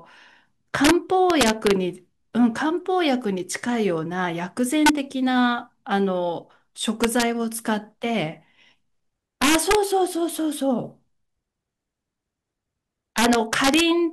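Six bursts of integer overflow crack through this speech, at 0.85–0.91 s, 1.30–1.71 s, 4.86–4.89 s, 7.04–7.22 s, 9.42–9.75 s and 13.18–13.81 s. The loud peaks run about 1 to 3 dB past the integer limit early on and about 6 dB in the last two. Instead of clamping, each peak wraps to the opposite sign. You hear harsh, violent snaps, much nastier than ordinary clipping, and worst at 9.4 and 13.2 s.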